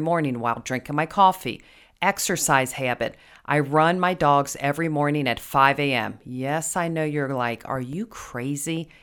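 CD scratch ticks appear from 7.23 to 8.11 s in this speech, just after "I know": six short ticks, the longest a few milliseconds. A blemish on the disc destroyed more data per rotation than error correction could rebuild, so the player patched or muted those samples.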